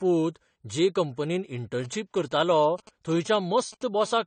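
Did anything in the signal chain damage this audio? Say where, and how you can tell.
Yes. The speech was likely squeezed through an AAC-LC codec at a low bitrate, around 32 kbps. Throughout, nothing remains above 9 kHz, and the speech sounds dull and smeared with a warbly, fizzy edge on sibilants. That fits the encoder lowering its cut-off and starving bands to meet the bitrate.

In the analogue wiring, a nearby 2G phone exchanging signalling bursts with its network was picked up by the audio circuit. From 1.84 to 3.83 s, just after "जे कंपनींत", a galloping dit-dit-dit of short 217 Hz buzzes sits roughly 20 dB below the speech. The circuit rectified the intermittent radio pulse groups into audible bursts.

The same analogue stage picks up GSM phone buzz from 4.01 to 4.22 s, once that phone holds a call and transmits in bursts 217 times a second. A steady, raspy 217 Hz buzz with many harmonics, about 25 dB below the signal, has no relation to the speech. 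That is the 217-per-second transmit pulsing being rectified.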